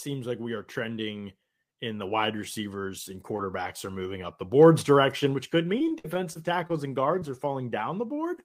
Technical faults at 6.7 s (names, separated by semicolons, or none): repeated packet loss (robotic sound)